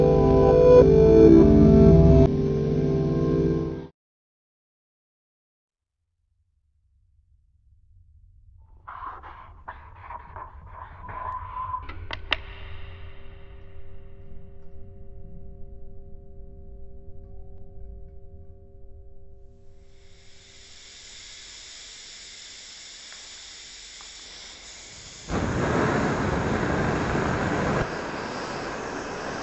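From start to finish the sound plays at half speed and a full octave low, 12 semitones down, heavy and dragging. This is wrong sample rate: the material appears to have been captured at 44.1 kHz but played back at about 22 kHz with no conversion, lowering tempo and pitch together.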